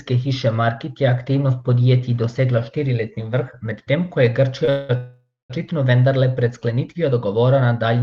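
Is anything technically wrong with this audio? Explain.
Yes, the speech stalls three times in quick succession. It travels over an Opus call path, whose content tops out around 12 kHz.

Short stall from a late packet, 4.65 to 4.70 s: a packet arrived late and the jitter buffer ran dry, so the receiver stretched the last bit of sound for 25 ms until the packet came, then resumed from the same point. Nothing is lost, but the sound is held unnaturally long, with a faint buzz or dip, and everything after it now runs 25 ms later.

Call audio freeze, 4.70 to 4.91 s and 4.97 to 5.52 s: the likely cause is packets held up in transit, leaving the jitter buffer empty. The receiver fills the gap by extending the last sound as a fading buzz or hiss. The first freeze lasts 194 ms. The second lasts 526 ms, and its final 220 ms is silence. Speech then picks up where it stopped, now delayed.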